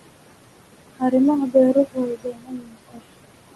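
From the start, noise suppressor artifacts are present: room noise sitting about 11 dB below the speech is pulled down by about 21 dB between phrases and swells back under them. On a spectrogram the noise floor shows patchy, flickering gaps that come and go with the speech.

From 1.74 to 3.01 s, speech is cut by the noise suppressor. It treats parts of the speech as noise and lowers them by up to about 22 dB, over roughly a second in total, so soft sounds and endings seem swallowed. The waveform shows sudden dips in the envelope, and the spectrogram shows faded or missing energy in those stretches, with content above 12 kHz absent throughout, consistent with the Opus call path.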